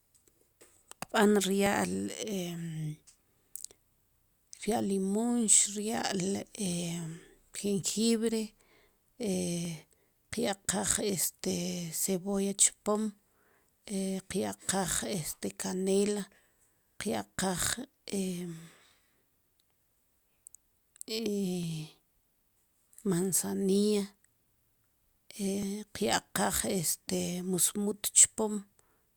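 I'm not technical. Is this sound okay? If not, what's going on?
No, not quite. The recording system likely handles sound in blocks of about four seconds, and each time it switches from one block to the next, a tiny sliver of audio is lost, only a few thousandths of a second. This is audio missing between chunks. You hear it as brief skips or small clicks in the speech at 1.67, 9.65, 13.65, 17.64, 21.63 and 25.63 seconds, where the sound on either side is joined directly together.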